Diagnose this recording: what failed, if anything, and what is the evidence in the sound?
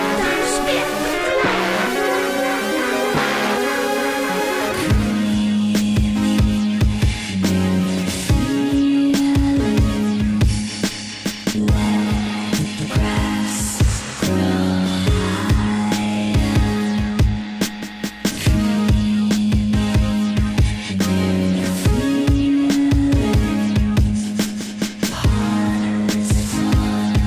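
Nothing failed, and the sound gives no evidence of a fault at any stage.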